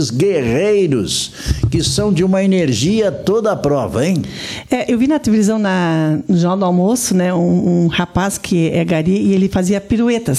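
A short, sharp glitch at 1.80 s cuts through the audio, a brief burst of misplaced energy peaking around -15 dBFS. It is a corrupt frame decoded: bits inside one compressed frame were damaged, and the decoder played that frame anyway. The garbled gain values and misread spectral codes placed energy at the wrong frequencies for roughly the length of a single frame, which is why it is heard as a quick, isolated glitch.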